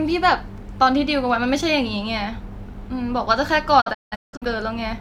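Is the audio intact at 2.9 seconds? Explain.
Yes, the speech at 2.9 seconds plays through cleanly, with no dropout, click, distortion or other fault at that moment.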